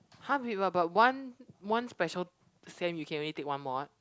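No technical faults can be heard anywhere in this speech recording.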